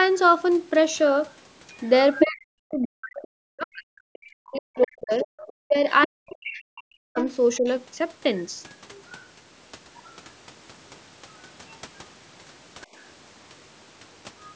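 From 1.73 to 2.74 s a second voice comes through nearly as loud as the talker, only about 5 dB under. That's the other side's voice leaking through, most likely far-end audio from a loudspeaker that the echo canceller didn't fully remove from the mic.

From 2.23 to 7.66 s the talker's own speech keeps dipping and breaking up, about four seconds of it in total, with the worst drops around 40 dB down. That's speech suppressed in double talk: both sides were talking at once, and the canceller likely turned everything down because it couldn't separate the talker from the echo.

During that stretch the leak comes back at 4.57 to 6.63 s and 7.18 to 7.57 s, about 15 dB below the speech. After that only faint scraps remain, at 8.91, 10.05, 11.71 and 14.44 s, roughly 30 to 35 dB down.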